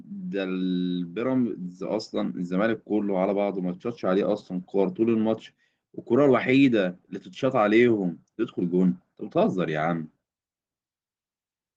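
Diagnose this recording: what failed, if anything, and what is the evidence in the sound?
Nothing failed in this recording.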